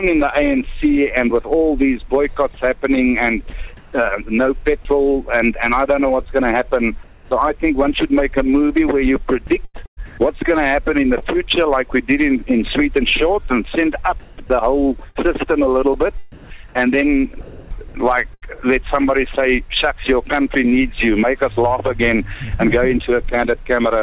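Sound dropped by the voice detector at 3.50 to 3.53 s: a 30 ms piece of sound vanishes under steady noise, likely because the sender's detector judged it background and stopped transmitting. From 3.50 to 3.92 s there is comfort noise in place of the background. The real ambience gives way to a flat, featureless hiss, likely because the sender stopped transmitting and the receiver filled the gap with synthetic noise. Sound is dropped by the voice detector again at 7.04 to 7.31 s, where about 140 ms of sound is lost and 270 ms is filled with comfort noise. Sound chopped by the voice detector at 9.47 to 10.18 s, 14.20 to 15.32 s and 16.32 to 18.56 s: the detector likely switches sending on and off repeatedly, so the sound breaks up. Across these three stretches 350 ms, 260 ms and 620 ms are replaced. Throughout, the call path passes nothing above 4 kHz, which points to G.711 A-law at 64 kbps.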